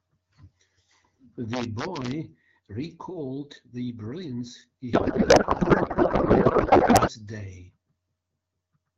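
From 1.54 to 2.11 s the speech breaks into violent cracks on its loudest peaks: integer overflow. The level runs about 2 dB past the integer limit, and instead of being held there each peak wraps to the opposite sign. That full-range jump is far sharper than the flattened buzz of clipping.

From 4.93 to 7.11 s a codec payload misread replaces the speech with garbled noise and warble that barely tracks it. The AMR-WB frames were packed octet-aligned but decoded as bandwidth-efficient, so every field lands in the wrong place. Unlike packet loss, nothing drops out; the decoder keeps producing confident nonsense until the formats match again. Around these sections the 12.65 kbit/s AMR-WB coding adds only light colouring.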